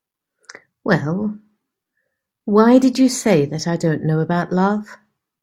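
No technical faults can be heard anywhere in the speech. There is nothing to place on the timeline and nothing to correct.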